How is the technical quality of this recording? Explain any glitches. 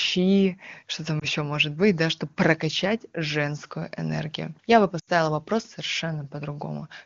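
The recording has two brief dropouts from lost AMR speech frames, heard over an AMR-WB (HD Voice) path whose clean detail fits its top rate.

At 1.19 to 1.25 s, between "что там" and "может быть да чтобы", and at 4.99 to 5.09 s, radio errors spoiled frames. The decoder then reused its last good settings at falling gain. The first event fits one 20 ms frame and is a brief dip or warble. The second fits about four frames: the sound drops to near silence within two frames, then returns rough. On a spectrogram the harmonics freeze and thin, and the waveform envelope sags.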